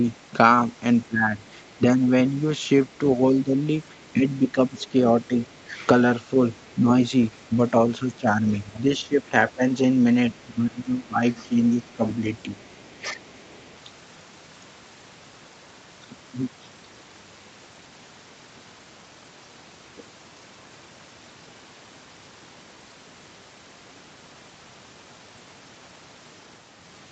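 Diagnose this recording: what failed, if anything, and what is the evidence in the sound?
Speech suppressed in double talk at 1.08–5.71, 6.74–9.62 and 10.54–13.21 s: the waveform shows dips of about 10–15 dB. The likely cause is the call's echo canceller ducking the talker while the far end speaks.

Other side's voice leaking through at 3.85–5.59, 6.56–6.74, 8.16–9.03 and 10.34–13.72 s: faint second-voice harmonics appear on the spectrogram, about 30–40 dB down. This is likely residual loudspeaker echo the canceller missed.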